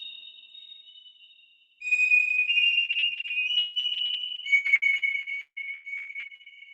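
From about 2.85 s to 6.48 s you get a run of repeated packet loss, and it goes robotic fast. Packets keep dropping out, dozens of holes back to back, the longest around 181 ms, and the decoder patches each one by stretching the last bit of sound it had. Close to 40% of that stretch is filler, so it turns choppy with chunks missing, all sitting inside the 8 kHz band of the call codec.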